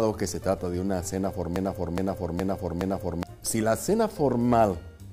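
From 1.56 to 3.23 s, a broken-record loop repeats one 0.42 s fragment four times, likely from a stalled stream, showing as identical waveform blocks.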